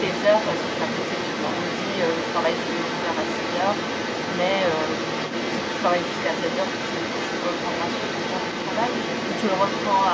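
The echo canceller on the talker's end likely left part of the loudspeaker signal in the microphone, so the other side's voice leaks through for the full clip, from 0 to 10.1 s. It sits only a few decibels below the main speech, a second competing voice throughout, within the call's band that stops at 8 kHz.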